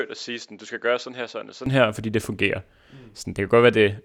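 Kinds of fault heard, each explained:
Input switched to a poorer device, 0 to 1.66 s: for this opening stretch the speech is quieter by roughly 5 dB, has nothing above 7.5 kHz so it sounds duller, and carries a faint extra noise floor sitting around 45 dB below it. At 1.66 s, just before "her fordi det fungerer", it opens up to full brightness with no gap, likely because the recording input moved from a narrower-band microphone to a better one.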